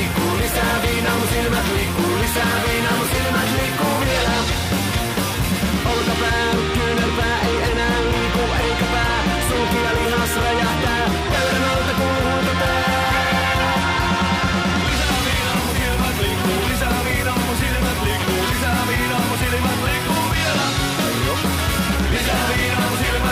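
Nothing stood out as a technical fault on listening to the clip.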